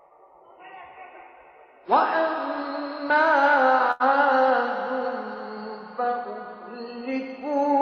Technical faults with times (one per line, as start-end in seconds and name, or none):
3.91-4.02 short stall from a late packet